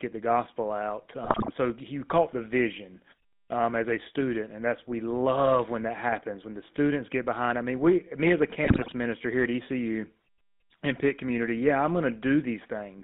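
The whole clip runs through the GSM full-rate codec, and you can plainly hear it. The band sits between about 200 Hz and 3.7 kHz, and the pulse-driven vocal-tract model leaves the speech buzzy and gravelly, which fits the old 13 kbps full-rate coder.

Then come GSM bit errors, at 1.24 to 1.51 s, right after "the gospel out" and before "so you caught the", and again at 8.64 to 8.92 s, after "we me as a" and before "minister here at". Corrupted filter, pitch and gain values throw each frame off, so the speech bursts into squawks and gargling for roughly a quarter second each time.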